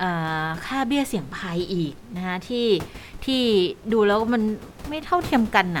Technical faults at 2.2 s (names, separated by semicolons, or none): none